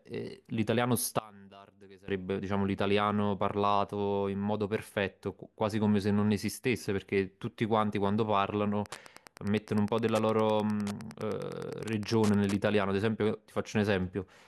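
From 1.19 s to 2.08 s the speech suddenly drops by about 24 dB and turns faint, as though most of the voice has been hollowed out and only a ghostly residue remains. This is one channel inverted, likely heard through a mono sum: with one side's polarity reversed, everything the two channels share cancels, so the centred voice nearly disappears and only the small differences between left and right survive.

Between 8.84 s and 12.62 s a steady ticking runs under the speech, roughly ten clicks a second and sitting around 20 dB below it. This is Wi-Fi interference. A nearby wireless radio's beacon, repeating every 102.4 ms, is being picked up and rectified by the audio circuitry, turning each radio burst into an audible tick. That regular beacon rhythm is what gives the noise its clockwork pulse.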